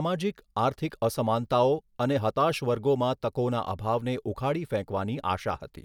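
No technical faults can be heard anywhere in the recording.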